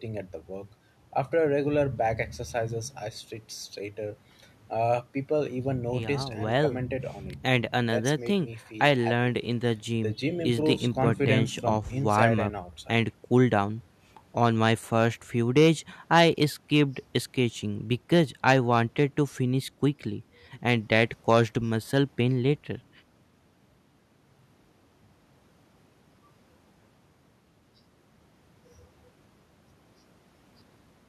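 No technical faults can be heard anywhere in the recording, and the signal stays steady and intact throughout.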